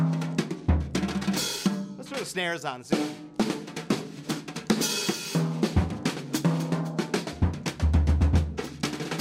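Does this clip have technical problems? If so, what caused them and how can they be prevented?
No, this clip has no technical problems, so there is nothing to prevent.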